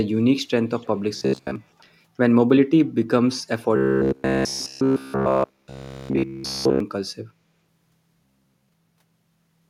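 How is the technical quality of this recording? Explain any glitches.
The recording has two recurring faults: a faint echo leak early on and three stretches of robotic, buzzing speech.

Echo leak, 0.77 to 0.88 s and 1.79 to 1.84 s: a faint delayed copy of the speech arrives about 329 ms after the original, at about 35 dB and then about 40 dB below it. The likely cause is a far end playing the call through a loudspeaker, with its echo canceller failing to fully suppress what its microphone picked up and returning that residue. At these levels it is faint, brief ghosting.

Robotic sound from repeated short buffers, 1.17 to 1.56 s, 3.76 to 6.80 s, and 8.25 to 8.69 s: the speech turns into a rigid, metallic buzz at 66.8 Hz that still roughly tracks the speech contour. The likely cause is audio arriving too infrequently, with the playback side looping the last fragment to fill the gaps while real audio is dropped. 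A 66.8 Hz buzz fits a repeated segment of about 15 ms. In the short first and last stretches most of the audio is replaced this way. The three-second middle stretch is replaced throughout, so it is the most damaged section.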